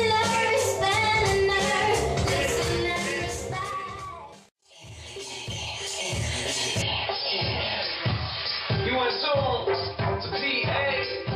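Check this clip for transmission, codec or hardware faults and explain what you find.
One fault appears: from 6.82 s to the end, the recording input has likely switched to a poorer device, whose narrower passband cuts everything above 5.3 kHz. With no gap at the switch and the level roughly unchanged, the sound abruptly turns duller, over a faint background noise about 50 dB down.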